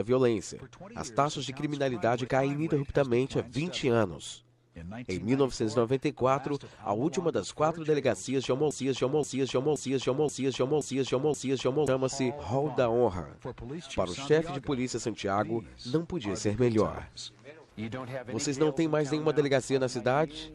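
A broken-record loop hits this audio from 8.71 to 11.88 s: a 526 ms fragment repeats six times as identical tiled waveform blocks, likely a stalled stream.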